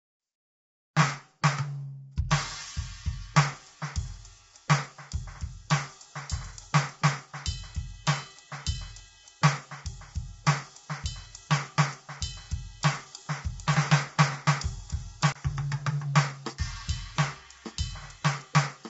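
Music, coded throughout with audible damage that likely comes from low-delay AAC compression (AAC-ELD) at a low bitrate around 24 kbps. It sounds grainy, with noise filling the gaps between harmonics, and nothing is present above 7.7 kHz, which a spectrogram shows as a flat ceiling with speckled noise below it. Pre-echo appears at 2.16 s and 2.29 s, where the codec's quantisation noise spreads about 14 ms and 17 ms ahead of sharp attacks. On a spectrogram, this shows as a brief vertical smear of broadband noise just before each attack. A CD skip at 15.32 to 15.35 s mutes for about 30 ms, then playback resumes from a different point on the disc. The waveform shows this as a short dip to near silence followed by an abrupt discontinuity in the music.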